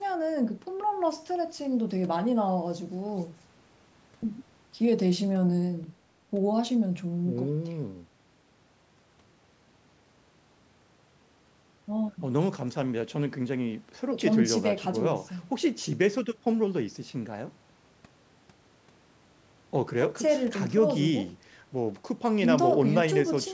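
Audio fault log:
Nothing to log here: the speech just carries the usual call microphone processing, with the lowest bass trimmed and nothing up above 8 kHz, and that's how a call line is meant to sound.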